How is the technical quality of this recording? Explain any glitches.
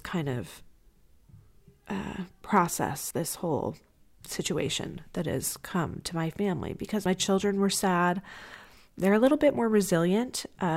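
Two small skips spoil the recording. It has audio missing between chunks at 3.11 s, after "uh process", and 7.06 s, before "children were sad". About 50 ms drops out and the edges butt together, likely from 4-second recording chunks.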